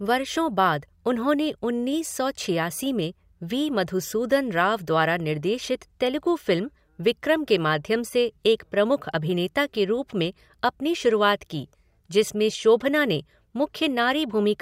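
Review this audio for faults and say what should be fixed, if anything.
No faults; nothing needs fixing.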